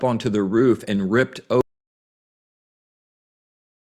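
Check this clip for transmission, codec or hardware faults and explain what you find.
There is one fault, an audio dropout to silence. From 1.61 s, just after "the roof and ripped", the speech cuts to total silence until the end. The input was likely lost while silence kept being written.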